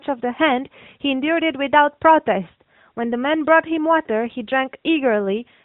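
Nothing in this speech clip stands out as a fault; it simply has the narrow, phone-call character of the AMR narrowband mobile codec.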